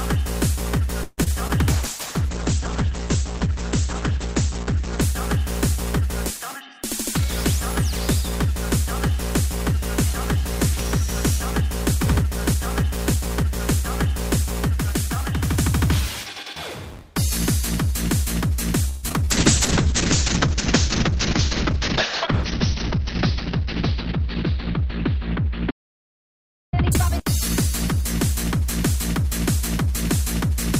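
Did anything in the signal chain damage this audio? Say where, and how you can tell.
Yes. Four kinds of damage are audible, all from the capture, network and call-processing side of the chain.

Network: repeated packet loss (robotic sound) appears twice. From 1.03 to 1.51 s there are three gaps, the longest 145 ms, with about 38% of that stretch concealed. From 18.88 to 19.29 s there are four gaps, the longest 149 ms, and concealment covers about 46%. The receiver patches each hole by extending the previous sound, so these passages turn choppy, with small pieces missing outright.

Codec: a call bitrate drop starts at 1.70 s. The encoder falls from 64 kbps to 10 kbps, stays at the bottom for about 3.3 s, and recovers by 5.07 s. Audio bandwidth shrinks from 20 kHz to 8 kHz, so the top end vanishes and the sound turns coarse. A deeper drop runs from 19.33 to 28.74 s, down to 6 kbps for about 4.7 s, with bandwidth cut to 6 kHz. 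That passage is muffled and rough.

Jitter buffer: there are three speed-up episodes where the buffer sheds surplus delay by cutting short pitch-period slices. From 6.43 to 7.22 s playback runs at 107%, trimming around 70 ms. From 11.60 to 13.44 s it runs at 104%, removing about a tenth of a second. From 22.97 to 24.81 s it again runs at 104%, trimming around 70 ms. Pitch holds steady, and the 107% stretch sounds hurried.

Capture or driver: an audio dropout to silence occurs from 25.71 to 26.73 s. For about 1.02 s the signal goes silent, with no room tone underneath, and then it resumes abruptly. That points to the input being lost, likely through a device or link failure or a stray mute, while the recorder kept writing silence. Whatever occurred in that second is gone.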